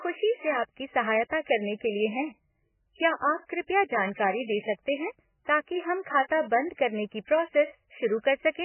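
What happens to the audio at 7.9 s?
At 7.9 s the speech has the same damage heard across the whole clip: nothing above about 3 kHz, with a watery, swirling texture and smeared onsets. This is likely heavy MP3 compression at a very low bitrate. Starved of bits, the encoder drops the treble and switches weak frequency components on and off between frames.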